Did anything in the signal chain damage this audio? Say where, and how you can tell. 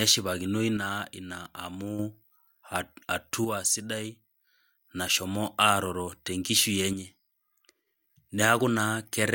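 Yes. The speech abruptly drops about 6 dB from 0.77 to 1.99 s, from 3.45 to 4.85 s and from 6.93 to 7.87 s, then snaps back to full level each time. These are one-channel dropouts, likely in the analogue wiring, such as an intermittent stereo connector. While one side is lost, the mono sum carries only the surviving channel, so material common to both sides falls by half in amplitude.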